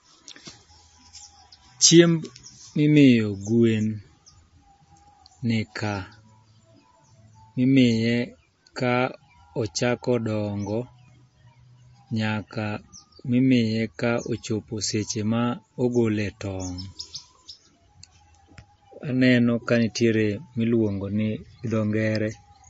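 Throughout the speech, a starved encode, likely MP3 compression at a rate the sound puts near 32 kbps, cut everything above 7.6 kHz and let weak frequency lines drop in and out between frames, so the audio is plainly dull, watery and swirling, with metallic s sounds and smeared attacks.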